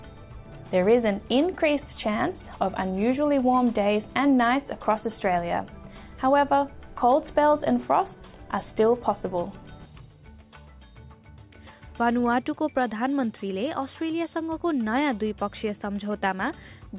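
No faults detected anywhere in the recording.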